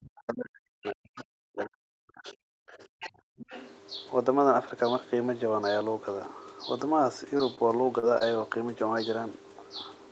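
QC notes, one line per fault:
0.00–2.36 s, speech suppressed in double talk: the talker's level sinks by up to about 40 dB for roughly two seconds, thinning and breaking up. This is likely an echo canceller unable to separate near-end speech from loudspeaker echo and ducking both.
0.84–0.92 s, 1.17–1.24 s, 2.28–2.33 s, other side's voice leaking through: short scraps of a second voice about 25 dB below the talker, likely far-end loudspeaker sound that the echo canceller failed to fully remove from the microphone.
2.64–2.73 s, background gated by the echo canceller: room sound drops by about 34 dB for around a tenth of a second, then returns. The canceller clamped the microphone hard while the loudspeaker played and released once it stopped.
2.73–3.10 s, other side's voice leaking through: a longer, more audible stretch of second voice, about 15 dB under the talker, likely residual loudspeaker echo getting past the canceller.
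3.09–3.51 s, speech suppressed in double talk: the talker dips again by up to about 40 dB over roughly 0.4 s, likely the canceller treating overlapping speech as echo and suppressing it.
3.37–3.69 s, other side's voice leaking through: the second voice persists about 20 dB below the talker, likely uncancelled echo overlapping the suppression above.
7.37–7.41 s, 7.55–7.59 s, 7.99–8.04 s, 8.18–8.22 s, short concealed packet loss: brief smears or wobbles where 20 ms of audio went missing, 40 ms at 7.99 s. The decoder extended the preceding sound to bridge each gap before blending back into real audio.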